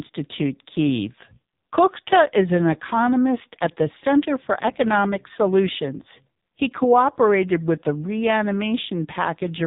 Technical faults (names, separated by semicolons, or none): AMR narrowband mobile codec